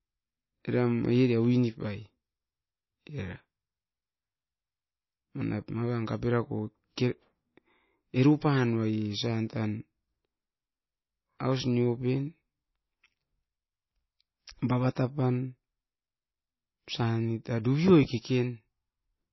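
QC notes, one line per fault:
Throughout, low-bitrate audio saved at a high bitrate. The speech has nothing above 5.8 kHz, so sibilants sound dull and the top end is missing. The smeared, swirly texture of a heavily squeezed MP3 stays audible across the whole clip. This is likely an MP3 first made at a very low rate, around 24 kbit/s, then re-encoded at about 174 kbit/s. The larger second file cannot bring back the detail the first encoding threw away.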